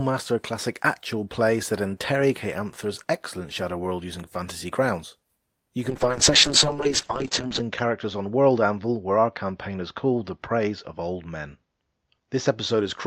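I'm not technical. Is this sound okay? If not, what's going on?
No. From about 5.91 s to the end, the speech turns rough and muffled, losing its crisp top end. This is a call bitrate drop: the connection cut the data allowed, so the voice was squeezed far harder and everything above 8 kHz was dropped.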